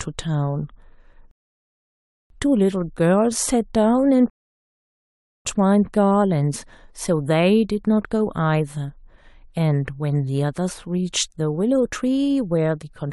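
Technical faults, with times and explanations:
1.31–2.30 s and 4.30–5.45 s, rebuffering stall: the speech halts mid-flow and drops to dead silence for about 0.99 s and then 1.15 s, each time picking up exactly where it stopped. The player emptied its buffer of downloaded audio and waited for more data, so nothing is lost but time is added. On a waveform each gap is a flat line; on a spectrogram, a clean empty vertical band with abrupt edges.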